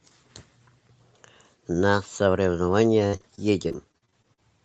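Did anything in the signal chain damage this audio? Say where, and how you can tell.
Yes, in the network. Repeated packet loss (robotic sound) runs from 3.07 to 4.39 s. Holes up to 49 ms are patched with continued sound, so the speech turns choppy.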